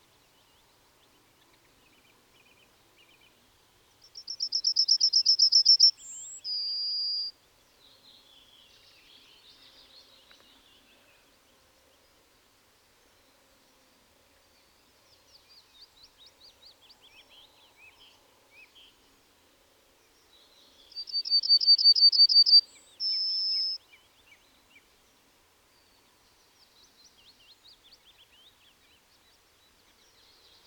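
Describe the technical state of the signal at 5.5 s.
At 5.50 s there is a single sharp click, most likely dropped samples: a couple of samples missing from the stream make the waveform jump abruptly to a later value.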